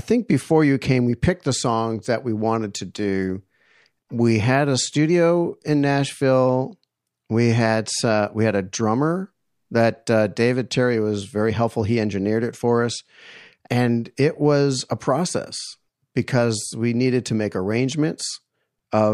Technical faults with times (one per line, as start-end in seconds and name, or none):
0.16-19.10 clock slip clicks